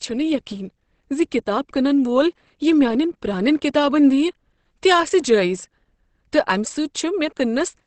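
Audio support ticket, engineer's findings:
Whole clip. Speech sounds muffled and hoarse, with nothing above 8.5 kHz. Codec damage plainly audible. Likely Opus compression in its speech mode, with bandwidth narrowed to wideband. Bits too scarce for detail, which fits a bitrate near 16 kbps.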